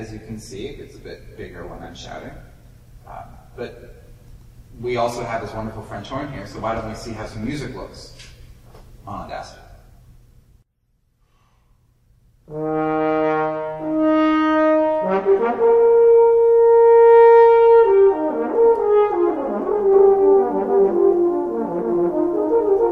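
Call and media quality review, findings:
Doubled audio track from 19.93 s to the end: everything comes in twice, second copy roughly a third of a second behind, at about the same level. Likely a second capture path or edit layering the same feed out of step. Copy is full-band and dry, no room tail, and it cuts in abruptly at 19.93 s rather than fading up. Worth checking the routing there.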